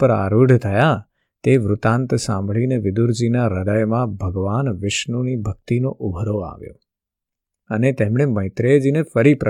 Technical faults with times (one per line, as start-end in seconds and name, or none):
none